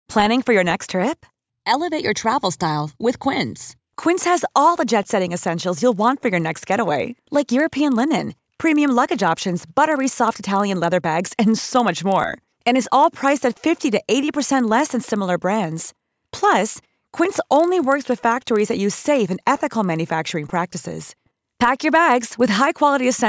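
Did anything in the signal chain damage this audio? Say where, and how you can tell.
Yes. The damage sits in sample-rate conversion, done block by block in the buffer path. From 5.44 s, just after "jet setting", to the end, a regular 25 Hz tick rides on the speech. It vanishes in pauses. That points to a resampler restarted on every block. Each 40 ms block was converted alone, likely from 48 kHz down to 16 kHz. The filter lacked real neighbouring samples at each edge. So every block boundary leaves a small error.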